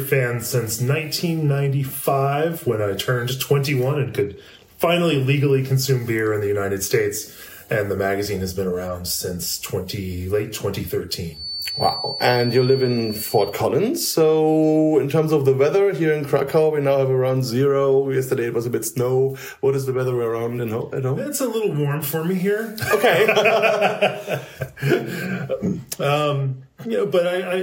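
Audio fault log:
11.29 to 13.59 s: feedback whistle. A thin, steady tone at 4.5 kHz sits behind the sound, about 10 dB under it, and swells and fades slowly in level. It likely comes from a loudspeaker-to-microphone loop held at the edge of feedback. The tone rings on without running away.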